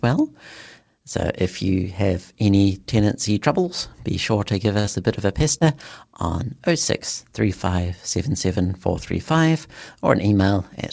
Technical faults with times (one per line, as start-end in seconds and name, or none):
4.80-4.86 short stall from a late packet
4.86-4.89 short concealed packet loss
5.58-5.62 short concealed packet loss